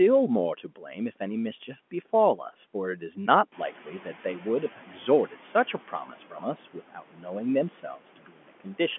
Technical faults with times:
0.00-8.98 noise suppressor artifacts
0.64-0.96 speech cut by the noise suppressor
3.52-5.41 noise suppressor catching up
4.76-4.93 speech cut by the noise suppressor
5.73-6.43 speech cut by the noise suppressor
6.92-7.29 speech cut by the noise suppressor
8.16-8.66 speech cut by the noise suppressor

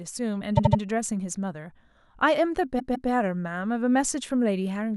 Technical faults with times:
0.56-0.80 repeated frames
2.78-3.10 repeated frames

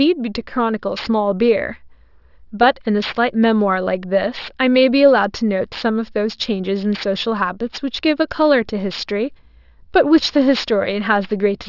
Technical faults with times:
0.00-11.69 aliasing

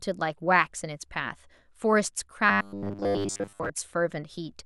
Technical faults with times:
2.49-3.70 robotic sound from repeated short buffers

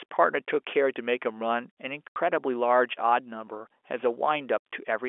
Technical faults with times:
2.09-2.16 packet loss filled with silence
4.59-4.61 packet loss filled with silence

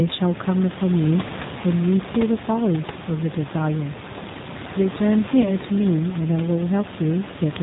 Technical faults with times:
0.00-7.62 G.729 codec
5.42-5.52 VoIP packet loss concealed by the speech codec

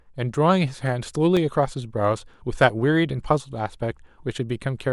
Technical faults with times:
0.35-1.37 CD scratch ticks

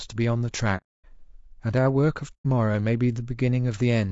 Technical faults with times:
0.00-4.11 low-delay AAC compression
0.77-1.05 AAC frame loss with muting
2.33-2.46 AAC frame loss with muting

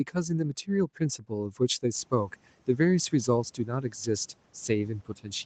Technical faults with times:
1.19-1.32 speech cut by the noise suppressor
3.57-4.08 speech cut by the noise suppressor

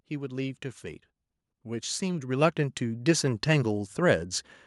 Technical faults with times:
0.08-4.00 automatic gain rising

